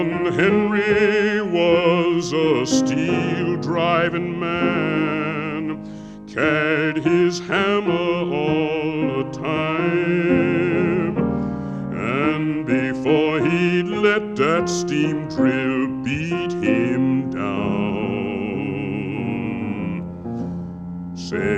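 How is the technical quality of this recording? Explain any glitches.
No glitches or technical faults can be heard here.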